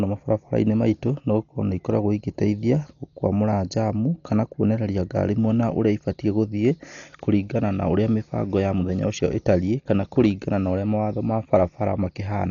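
Throughout the speech, likely Dolby Digital compression at a bitrate near 40 kbps removes everything above 6.9 kHz, leaving it dull with rough, fluttering noise.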